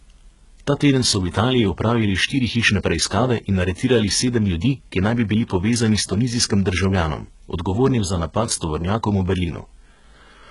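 All the way through, the speech carries what is likely HE-AAC compression, heavily squeezed, at a rate that fits roughly 12 kbps. The treble is rebuilt from copied lower bands rather than coded, so s sounds turn gritty and lispy, and nothing reaches past 11.1 kHz.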